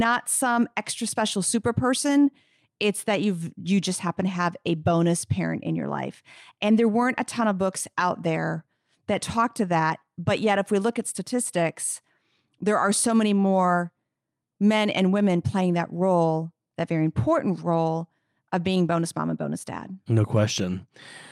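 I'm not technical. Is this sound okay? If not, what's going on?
Yes, it's fine: nothing in this recording sounds broken or off, so there's nothing here you need to worry about.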